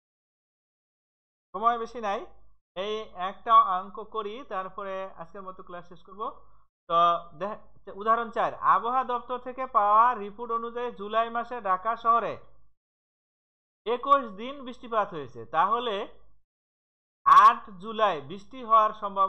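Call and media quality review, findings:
Hard clipping, 14.12 s. Gain stage or converter driven about 1 dB past full scale. Peak tops cut flat, giving a single brief crackle.

Hard clipping, 17.31–17.48 s. Overdriven about 2 dB for roughly 170 ms. The flattened waveform adds high harmonics, heard as crackle on the peaks. Probable cause is excess gain ahead of a fixed-range stage such as the ADC or an integer sample format.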